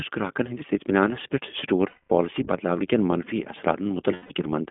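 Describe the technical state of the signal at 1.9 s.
At 1.9 s the signal sits inside a run of lost iLBC frames from 1.88 to 2.10 s. About 220 ms of packets never arrived, consistent with eleven 20 ms frames, so the decoder concealed the gap by repeating the last pitch cycle blended with noise and letting it fade. It sounds like a held, slightly buzzy, breathy vowel. Because each frame decodes on its own, normal speech resumes cleanly right at "پالسی بدلاونہٕ کین منفی".

Underneath, the whole clip runs through the iLBC codec, at a rate that fits its 15.2 kbps mode. The line band is limited to roughly 200 Hz to 3.5 kHz, so the speech sounds narrow and muffled, and the coding of the excitation adds a plainly audible rough, synthetic edge.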